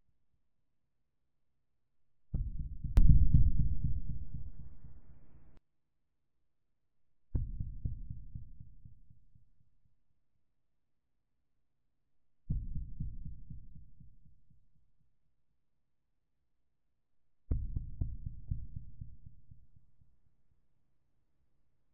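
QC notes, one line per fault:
2.97 to 5.57 s and 18.48 s to the end, sudden gain jump. The level leaps up by about 23 dB at 2.97 s and drops back at 5.57 s. At 18.48 s it rises about 6 dB. Background noise shifts with it. The likely cause is a digital gain step applied without a ramp.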